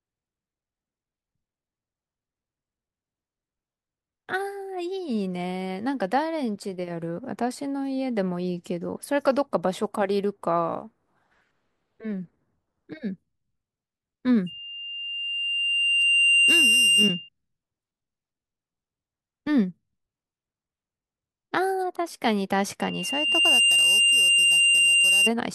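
Speech with a loudspeaker feedback squeal at two points: 14.46 to 17.29 s and again from 22.81 to 25.30 s. Both times it's the same 2.8 kHz tone, so the mic is hearing its own speaker and the loop gain tops one at that frequency. The first swells up over about two seconds, the second takes under a second, and both sit roughly 5 dB above the speech.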